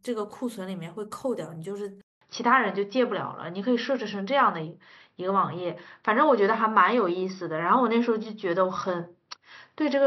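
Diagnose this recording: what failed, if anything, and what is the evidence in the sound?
At 2.01 s the speech drops out for about 200 ms, then resumes duller and boxier until the end, with nothing above 5.8 kHz, a level shift of a few decibels and a faint new noise floor well below the speech. On a spectrogram the upper band is cut off abruptly at the gap, and the waveform shows a short flat stretch. This points to the capture stage, most likely an input switched to a poorer device with narrower bandwidth and its own gain and noise.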